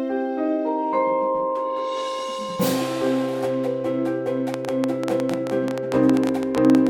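From 4.54 s to 6.88 s a train of clicks ticks over the sound at about 11.2 per second, unevenly spaced, some thirty similar pops standing well above the audio. This is likely interference from nearby equipment or a faulty connection or power supply injecting repeated pulses.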